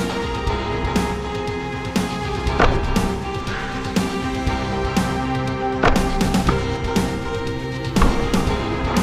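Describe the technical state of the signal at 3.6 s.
At 3.6 s the signal is intact, with no dropout, distortion, glitch or other fault audible at that moment.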